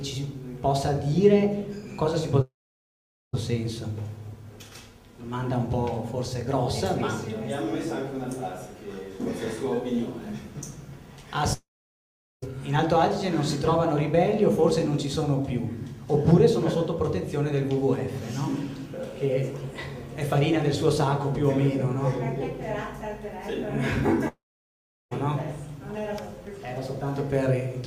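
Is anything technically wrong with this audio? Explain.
Yes. Three gaps occur, at 2.41 to 3.35 s, 11.53 to 12.44 s and 24.28 to 25.13 s, each lasting 0.84 to 0.92 s. Each opens with a brief buzzy or hissy continuation of the preceding sound that fades within about a tenth of a second, followed by roughly 0.8 s of silence. The audio then resumes with that stretch missing. This pattern is likely a long network dropout, where the receiver extrapolates briefly, then mutes until packets arrive again.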